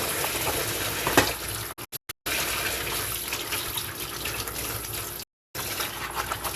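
At 1.72 s the audio starts dropping out: a digital broadcast dropout, where the receiver stops getting clean frames and mutes rather than play garbage. It shows up as a cluster of short holes between 1.72 and 2.27 s, about 384 ms of silence in all, the longest gap 144 ms. Each cut fades in just 8 ms, so it's nearly abrupt. A second, single mute runs from 5.23 to 5.55 s, about 312 ms. Whatever played during those gaps is simply gone.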